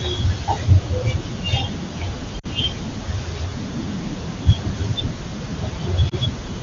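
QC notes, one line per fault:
2.39–2.46 s, lost AMR speech frames: about 40 ms, fitting two dropped frames, is filled by decoder concealment repeating the last pitch at falling gain, a brief drop toward near silence. The spectrogram shows smeared, fading harmonics and the waveform a sagging envelope.
6.09–6.14 s, lost AMR speech frames: one concealed frame of about 20 ms gives a short dip, seen as a momentary waveform notch and a faint horizontal smear in the spectrogram.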